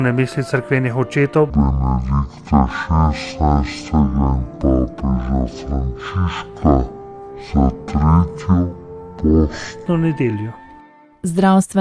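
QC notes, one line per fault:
1.5–9.86 s, wrong sample rate: the audio plays at half speed and drops a full octave (−12 semitones), with speed and pitch falling together by the same factor of 0.5. Because the timing and pitch shift are locked together, the samples are being clocked out at half their original rate with no resampling. That fits 44.1 kHz material played back at about 22 kHz. The sound turns low, slow and drawn out for the whole span.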